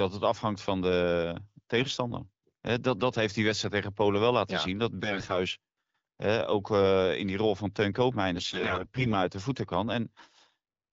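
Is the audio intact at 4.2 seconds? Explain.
Yes, at 4.2 seconds the speech is intact, carried through the AMR wideband (HD Voice) codec at 12.65 kbit/s with no fault at that moment.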